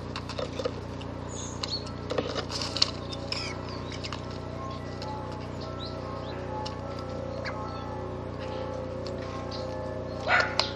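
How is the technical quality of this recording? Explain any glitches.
The recording has four compressed frames skipped faults, at 0.43 to 0.45 s, 3.31 s, 4.77 s and 6.31 s. Runs of 23.2 ms frames never decoded, so the sound jumps ahead by about 150, 100, 200 and 400 ms.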